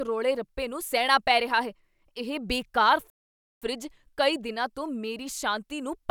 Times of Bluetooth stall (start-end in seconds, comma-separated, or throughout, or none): 3.10-3.62